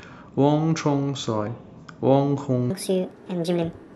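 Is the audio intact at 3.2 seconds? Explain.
No. At 3.2 seconds the speech sounds high and hurried, pitched up by around seven semitones and running at 1.57 times its proper speed. This is a section at the wrong speed, lasting from 2.70 s to 3.95 s, the end of the clip. Because pitch and tempo shift together, the passage was likely played back against the wrong clock, so its samples are read out faster than they were captured.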